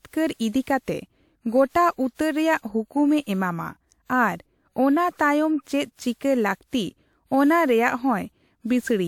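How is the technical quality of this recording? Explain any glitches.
The recording is compromised by generation loss for its whole length. The speech sounds swirly, smeared and hollow, with blurred consonant attacks, likely from repeated re-encoding, around five passes through a WMA-type codec near 128 kbit/s. Unlike a single low-bitrate encode, the bandwidth still reaches about 20.1 kHz.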